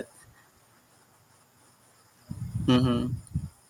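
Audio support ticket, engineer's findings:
Microphone overload, 2.68–2.86 s. Harsh crackle on the loudest peaks, with tops flattened against the converter ceiling. Peaks drive about 5 dB past full scale and a small fraction of samples clip. Likely cause: input gain set too high at the capture device.

Microphone volume stepped down, 2.76 s. Level drops abruptly by about 3 dB, with voice and background falling together mid-overload. Likely cause: call software's automatic gain control reacting to the clipping and cutting device input volume in one step.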